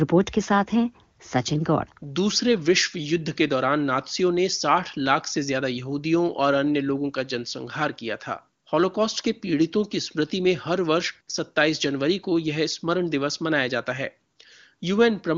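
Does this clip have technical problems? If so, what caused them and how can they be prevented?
No, this clip has no technical problems.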